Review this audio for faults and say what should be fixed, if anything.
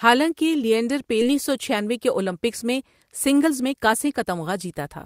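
Right after "حالانکہ لینڈر", at 1.21 s, there is a skip ahead. About 0.7 s of speech was dropped, and playback joins the two sides almost directly with no fill. A spectrogram shows an abrupt break in formant tracks, and the waveform shows a seam with no silence. Sizing the jitter buffer so it doesn't overflow would prevent this.

A jitter buffer speed-up runs from 1.75 to 2.35 s at 108% and from 3.03 to 4.91 s at 115%. The receiver trimmed pitch-period pieces, roughly 50 ms and then about 0.3 s in total, so the speech sounds hurried at unchanged pitch. A spectrogram shows compressed syllable spacing with harmonics unchanged. Smoother network delivery or gentler buffer adaptation would prevent this.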